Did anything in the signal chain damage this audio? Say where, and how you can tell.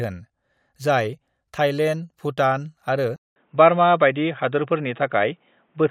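Yes. At 3.16 s, after a 200 ms gap, the speech turns dull and cuts off above 3.8 kHz. The input likely switched to a poorer device.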